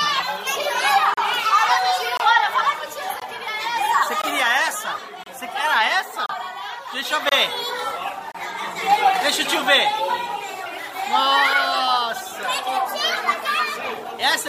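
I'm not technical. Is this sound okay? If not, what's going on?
No. The audio has a gap between stream segments, repeated eight times at 1.14, 2.17, 3.20, 4.22, 5.23, 6.26, 7.29 and 8.32 s, about once per second. The audio arrives in one-second pieces, and their timing leaves a tiny hole between some of them. The player fills each hole with silence, so you hear a sharp-edged dropout of about 20 to 34 milliseconds. Nothing is missing. The silence only adds about 0.2 s in total.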